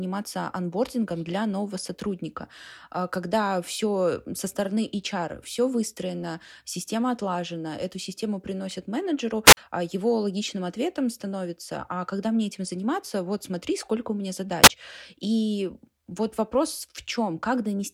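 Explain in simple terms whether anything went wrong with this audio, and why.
Two short glitches interrupt the speech. At 9.45 to 9.57 s a brief rush of hiss comes up, the sound drops to near silence for about 45 ms, then returns. At 14.63 to 14.68 s a similar burst of static flickers past with no real gap. Both are wireless microphone squelch dropouts: the radio signal faded, and the receiver muted the output to block the static rather than play it.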